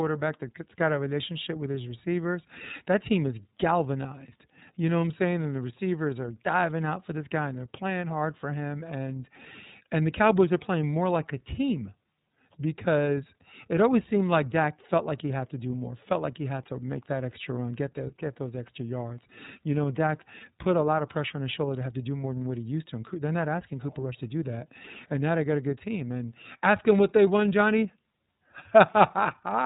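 iLBC codec coding runs throughout the speech, from start to finish. The codec squeezes the signal into short independent blocks, and the rough texture fits 30 ms frames at about 13.33 kbps, each block's excitation rebuilt without reference to the one before. Nothing above 3.8 kHz survives, so the speech sounds narrow and telephone-like. The coding damage is plainly audible as a grainy, slightly synthetic buzz carried on every syllable.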